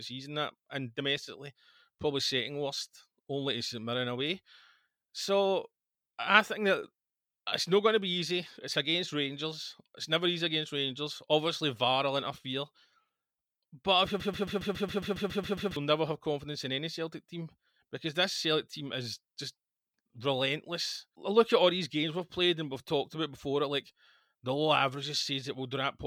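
Broken-record loop in this speech clip, 14.2 to 15.76 s: a 0.14 s fragment repeats 11 times, likely from a stalled stream resending its last buffer, so that stretch of speech is lost.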